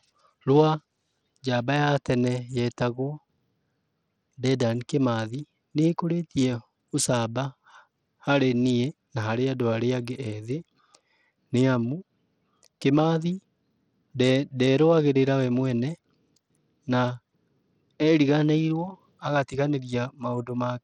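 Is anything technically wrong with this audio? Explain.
Yes. Throughout the speech there is plainly audible codec damage, most likely Bluetooth SBC compression at a low bit pool, consistent with a bitrate around 80 kbps. With so few bits to share among its sub-bands, the upper bands are starved and the rest coarsely quantised, so the treble flickers in and out and a gritty, aliased haze clings to the sound. A spectrogram shows ragged, intermittent energy above the lower bands and blocky, noisy texture rather than clean harmonics.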